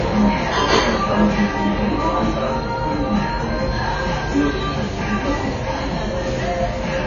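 From start to finish, the sound carries plainly audible codec damage, likely from AAC compression. Nothing is present above 6.9 kHz. The top of the spectrum is simply gone. That low cut-off fits an AAC-LC encode at a low bitrate, around 24 kbps. At that rate the encoder has too few bits for the detail. It drops the high band and coarsely quantises what remains. The result sounds dull and smeared throughout.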